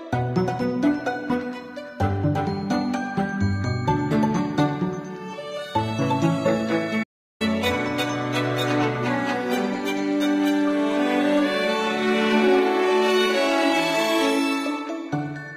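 At 7.03 s the audio cuts to silence for about 370 ms, until 7.42 s, a playback stall, likely from the player running out of buffered data.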